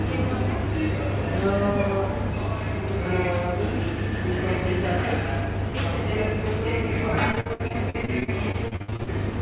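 The audio comes through a call path that limits it to telephone bandwidth, with nothing above 4 kHz, which fits a G.711-type narrowband codec. From 7.32 to 9.09 s it breaks up with repeated packet loss (robotic sound): a rapid succession of short holes, the longest about 61 ms, each patched by extending the preceding sound. Roughly a third of that stretch is synthesized fill rather than real signal, so the sound turns choppy, with fragments missing.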